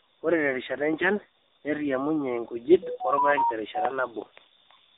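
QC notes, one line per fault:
throughout: AMR narrowband mobile codec. Speech is held to a phone band of 300 Hz to 3.7 kHz, with nothing above 3.8 kHz. Voicing is plainly buzzy and synthetic because a vocal-tract model is rebuilt from sparse excitation pulses, which fits a low AMR-NB mode near 7.95 kbps.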